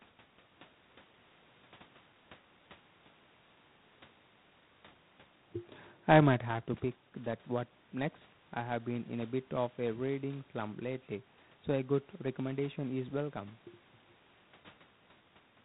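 G.726 ADPCM coding throughout this speech clip: each sample is sent as a few bits of prediction error, leaving a level-following rasping hiss and nothing above 4 kHz, which points to the 24 kbit/s mode. The room's background noise is part of the recording, and the level shifts around 6 s and near the end come from the talker moving.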